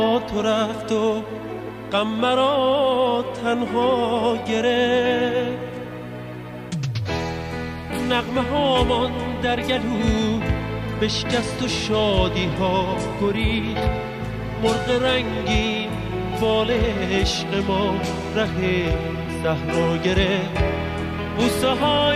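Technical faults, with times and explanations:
Nothing stood out as a technical problem on listening.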